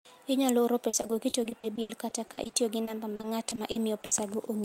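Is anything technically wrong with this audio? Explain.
Yes. From 0.89 to 4.13 s the speech turns choppy and robotic. This is repeated packet loss: over twenty short dropouts, none longer than 80 ms, were each filled by continuing the preceding sound. About a fifth of that stretch is this filler, which gives the stutter.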